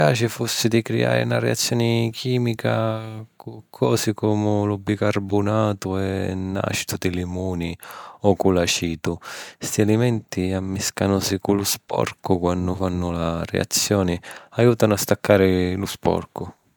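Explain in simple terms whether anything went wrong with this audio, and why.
Nothing went wrong here; the speech comes through intact, with no audible technical fault at any point.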